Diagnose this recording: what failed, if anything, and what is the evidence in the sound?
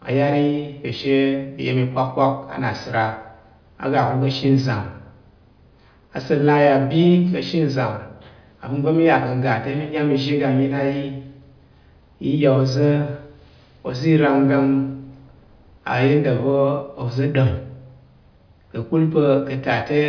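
Nothing stood out on listening to this speech recording, and no failure at any stage could be identified.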